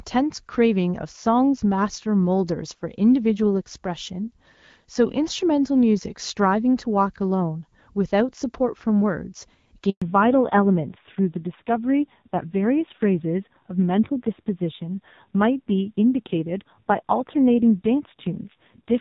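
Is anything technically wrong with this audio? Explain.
Yes, there are two problems, right next to each other. At 9.90 s there's a handover gap: the call was handed between networks and no speech frames got through, so the sound just drops out for about 120 ms and picks up again at 10.02 s.

Straight after that, from 10.02 s to the end, there's a fallback to narrowband. The call has dropped from HD Voice to an older narrowband codec, so nothing above 4 kHz survives. The sound goes duller and rougher, which points to something like AMR-NB at 5.9 kbit/s, down from roughly 12.65 kbit/s wideband before the switch.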